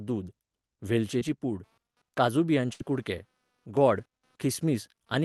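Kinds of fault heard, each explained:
Short concealed packet loss: Around 1.19 to 1.23 s, about 20 ms of the call arrived too late, and the receiver patched it by extending the preceding sound before blending back. It is heard as a brief smear. On a spectrogram the harmonics briefly go flat and blurred, with a small seam in the waveform.
Computer activity noise: From about 1.63 s to the end, interference from the computer's changing load rides on the shared audio ground. It is a quiet buzz pulsing around 200 Hz, roughly 45 dB below the speech. A spectrogram shows a faint comb of lines that ignores the speech.
Burst of packet loss: Between 2.73 and 2.81 s, about 60 ms of consecutive audio was lost. The receiver extrapolated the last sound for roughly 63 ms while fading it, giving a held, dying sound before speech resumes with that stretch gone. The waveform shows a smooth, decaying repetitive section, and the spectrogram shows a frozen, fading spectrum.
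One channel drops out: From about 3.19 to 3.77 s the sound abruptly drops by about 6 dB and then returns, likely because one stereo channel vanished before the mono mix. The waveform envelope shows a clean step down to half amplitude, and the spectrogram dims evenly across all frequencies.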